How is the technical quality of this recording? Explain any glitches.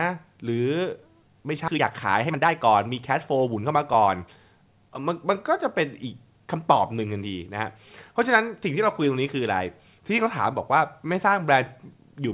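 Two glitches stand out early on, both on a call-style path that's band-limited, with nothing above 4 kHz and a sound that points to a narrowband G.711 A-law link at 64 kbps.

Skip ahead at 1.68 s: about a second of speech is simply gone. The audio jumps straight forward with no gap, because a chunk was dropped while later audio was already queued, so the two sides butt together abruptly.

Jitter buffer speed-up from 1.73 to 4.37 s: right after the jump, speech runs at about 117% speed with the pitch unchanged. The receiver was holding too much audio and trimmed tiny pitch-period slices over and over, shaving off roughly half a second, so it sounds rushed.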